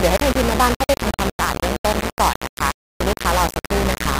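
Mains hum runs from start to finish: a steady 60 Hz tone with low harmonics, picked up from the power line and sitting about as loud as the speech. Low bit depth without dither is also present throughout, heard as coarse grit that follows the speech just a few decibels below it, with quiet passages sputtering. The likely cause is rounding to very few levels, consistent with about 3 bits.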